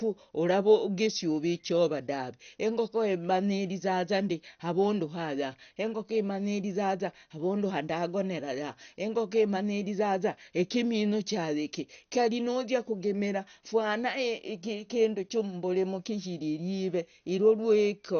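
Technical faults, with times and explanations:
Throughout, MP2 compression: the speech sounds dull and carries a gurgling, grainy distortion, with nothing above 6.5 kHz, which fits a low rate of about 48 kbps. The likely cause is MPEG Layer II coding starved of bits, so it drops whole upper sub-bands and quantises the remaining ones coarsely. A spectrogram shows a hard ceiling at 6.5 kHz and blocky patches flickering beneath it. The waveform shows little change.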